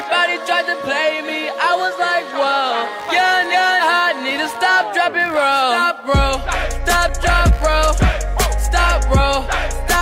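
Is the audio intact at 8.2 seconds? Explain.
No, computer activity noise runs through 8.2 s and the whole clip: processor or mouse load shifts the shared ground, adding a buzzy chirping around 70 Hz, roughly 30 dB below the sound.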